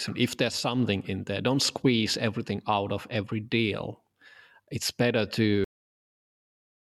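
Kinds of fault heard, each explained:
Cut-off end: The final stretch of audio was never written out, so the recording stops abruptly in the middle of a sound at 5.64 s. There is no fade or natural decay. The signal drops straight to digital silence and stays there for the remaining 1.2 s to the end. The speech is not allowed to finish, and the stop sounds like a hard edge rather than a pause.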